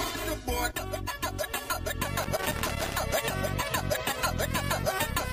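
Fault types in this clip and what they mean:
Channel delay (comb filtering): One channel arrives roughly 3 ms behind the other, and the two are folded to mono. Content common to both cancels at evenly spaced frequencies, starting near 150 Hz and repeating every few hundred hertz upward. From the start to about 2.01 s the sound is hollow and phasey, with fixed notches that stay put as the material changes.
Loose connector crackle: A worn or dirty contact in the signal path makes and breaks intermittently, chopping the signal on and off, and any DC on the line adds pops. Between about 2.23 s and 2.95 s this comes through as an irregular burst of scratchy crackle laid over the audio, with brief dropouts and clicks at random spacing rather than any steady pattern.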